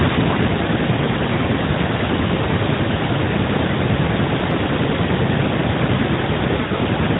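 From 6.6 to 6.8 s, lost AMR speech frames cause brief warbling dips. Gaps totalling about 80 ms are scattered across 160 ms, with the longest lasting 40 ms, which fits roughly four dropped 20 ms frames. During each gap the decoder repeats the last good pitch and vocal-tract settings at falling gain. On the waveform, the amplitude sags in short steps. On the spectrogram, the harmonics smear flat before recovering, all capped below 4 kHz by the narrowband AMR codec.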